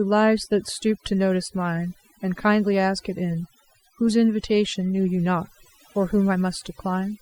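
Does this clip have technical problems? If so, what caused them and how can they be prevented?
Yes. Overdone noise removal runs throughout: the reduction was set so strong that frequency bands near its noise estimate were pulled down or cut, taking quiet speech detail with them. The result is a lowered background broken up into twinkling specks. Unlike a noise gate, which silences everything between phrases at once, this works band by band, so the specks flicker even while speech continues. Using gentler reduction settings and checking the result by ear would prevent it.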